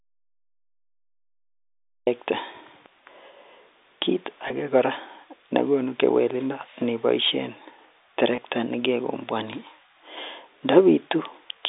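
The clip opens in an audio dropout to silence that's already under way and runs until 2.07 s: dead silence, no room tone at all. That's most likely the input dropping out, a disconnected device or a stray mute, while the recorder kept writing.

Then there's packet loss with pitch repetition, twice: once at 4.48 to 4.50 s and again at 8.36 to 8.38 s. Each gap is about 20 ms, which fits a single lost packet, and the receiver bridged it by repeating the last pitch period, so you hear a brief held, buzzy blip. All of this sits inside a narrow telephone band of roughly 300 Hz to 3.7 kHz from the G.711 A-law coding.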